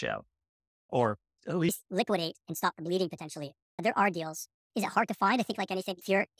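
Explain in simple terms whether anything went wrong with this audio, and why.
From 1.69 s to the end, the speech turns high and hurried: a wrong sample rate fault. The audio plays about 1.45 times too fast, raising pitch about 6.5 semitones. Unlike a pitch-only shift, speed and pitch rise together, which fits 22 kHz audio played at 32 kHz.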